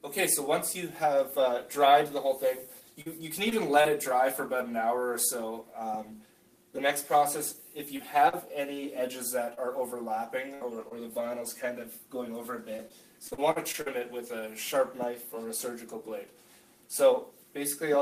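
From 3.01 to 3.87 s there is repeated packet loss (robotic sound): three gaps totalling 100 ms, the longest 42 ms, each patched by extending the preceding sound. On a spectrogram, short smeared bands replace the normal detail, with soft seams in the waveform at each gap.

Short concealed packet loss follows at 7.97–8.01 s (20 ms missing) and 8.29–8.34 s (40 ms). The decoder continued the last sound and blended back, heard as a brief smear. The spectrogram shows a short, blurred, frozen stretch.

Scattered short gaps run from 9.54 to 10.92 s: about three isolated losses totalling roughly 100 ms, the longest around 50 ms. Each appears as a small frozen or noisy patch in the spectrogram, with clear audio between.

The robotic packet loss returns from 12.76 to 13.88 s, now seven gaps totalling 220 ms (longest 44 ms), so the spectrogram shows a denser run of smeared patches.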